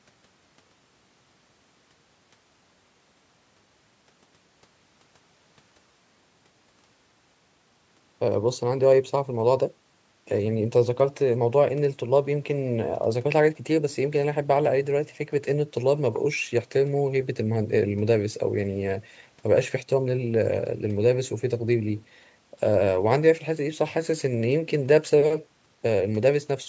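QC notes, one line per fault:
Nothing stood out on listening to this speech clip.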